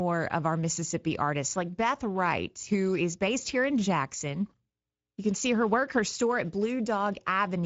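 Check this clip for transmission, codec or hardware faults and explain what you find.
Speex codec damage runs through the whole speech clip, and it is plainly audible. The speech sounds grainy and hoarse, with nothing above about 7.7 kHz. The rate points to a wideband setting near 16.8 kbps. CELP coding with a thin excitation budget leaves this noisy roughness rather than the swirly, warbling artefacts of a transform codec.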